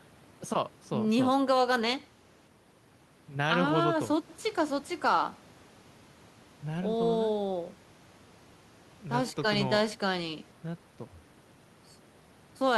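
No technical faults can be heard anywhere in the recording.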